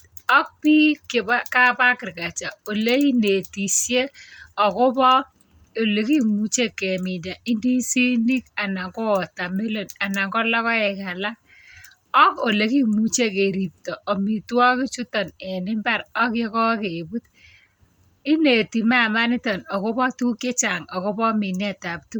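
Throughout the full length of the speech there is plainly audible Bluetooth LC3 compression damage, likely from an LE Audio link. The transform codec codes the signal in short blocks and, where bits run short, drops upper spectral detail and substitutes shaped noise, which leaves the voice with a grainy, breathy edge. The artefact pattern fits 10 ms frames at around 48 kbps. Content extends up to about 20.1 kHz.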